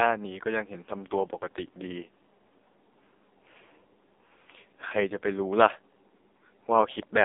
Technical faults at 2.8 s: AMR narrowband mobile codec

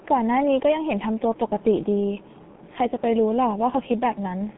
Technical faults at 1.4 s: G.723.1 codec

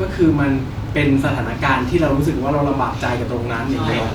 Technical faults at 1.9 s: none

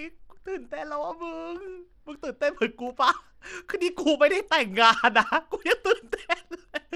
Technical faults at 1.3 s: Bluetooth SBC compression

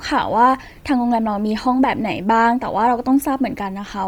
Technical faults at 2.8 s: Bluetooth LC3 compression

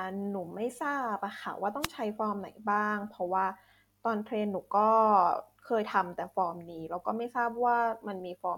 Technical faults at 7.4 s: none

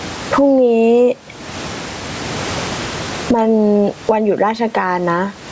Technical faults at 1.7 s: gain pumping

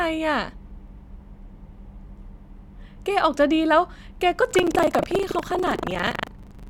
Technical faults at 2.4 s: compressed frames skipped

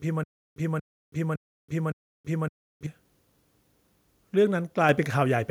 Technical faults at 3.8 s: none

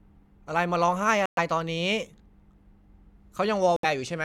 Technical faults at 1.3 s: Bluetooth dropout

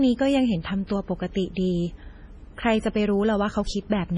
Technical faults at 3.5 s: MP3 compression

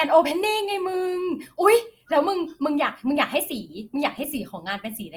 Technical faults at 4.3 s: Opus compression

